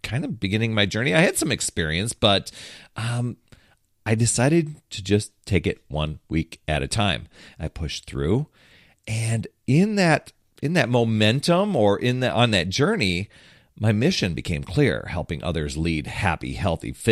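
No dropouts, clicks, distortion or level jumps occur anywhere in the speech; there is no fault to report.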